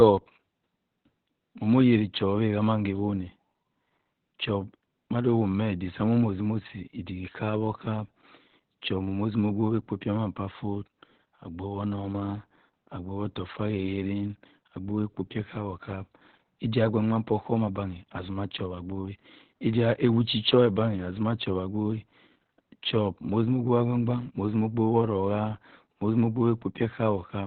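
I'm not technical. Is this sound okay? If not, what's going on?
No. From start to finish the speech sounds muffled, slightly hoarse and a little robotic, like a poor phone line. This is heavy Opus voice compression: to save space it discards everything above about 4.3 kHz and roughly approximates the rest of the voice.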